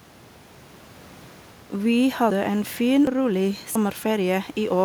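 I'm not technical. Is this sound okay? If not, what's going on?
No. A dropped buffer (overrun) shows up four times, at 1.54, 2.30, 3.07 and 3.76 seconds, each heard as the speech jumping ahead. The likely cause is the recording program falling behind, so the sound card overwrote audio before it was saved and the two sides were joined directly. Roughly a tenth to a third of a second goes missing each time, with the longest gap at 3.07, just after "en fin". The earlier skip at 2.30 comes just before "en fin".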